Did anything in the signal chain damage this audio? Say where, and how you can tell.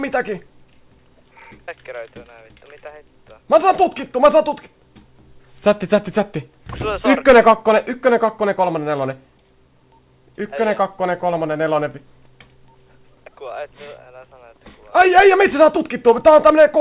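No damage from the chain.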